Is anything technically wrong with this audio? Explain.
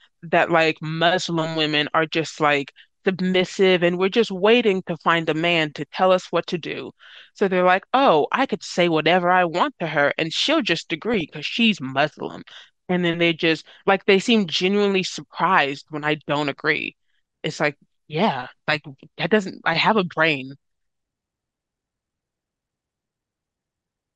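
Yes. Throughout this speech, the sound is dull and plainly gurgling and granular, with upper bands fading in and out. That points to MP2 compression, likely at a rate around 80 kbps, where upper sub-bands starve of bits. Unlike the burbling, it is constant.

DAB burbling appears from 11.14 to 11.21 s and from 22.18 to 22.85 s. Reception bit errors corrupt sub-band data, giving short blips of noise in single sub-bands rather than steady dullness.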